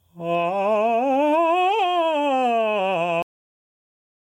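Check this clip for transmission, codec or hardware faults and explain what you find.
Two faults show up in the music: gain pumping through the whole clip, and an abrupt cut-off end.

Gain pumping runs from start to finish. The level swings by around 10 dB, pulled down whenever something loud hits. It sounds squashed and breathing. The likely cause is input gain set far too high, with a fast limiter or compressor clamping down on every peak.

The cut-off end lands at 3.22 s. The music stops dead mid-sound and drops straight to digital silence with no decay, staying silent to the end. That points to the final buffers never being written or played out, so the tail simply isn't there.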